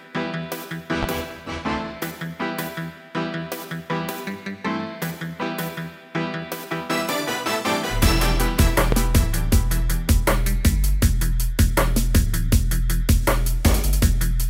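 The audio carries two loud pops. The first runs from 1.03 to 1.06 s and stands roughly 10 dB above the surrounding sound. The second, from 8.92 to 8.96 s, is stronger, at around 15 dB over the signal. Each is a single sharp hit lasting a few hundredths of a second, and the sound continues underneath both. The likely cause is a brief voltage spike from a plug, switch, static discharge or driver glitch entering the signal path.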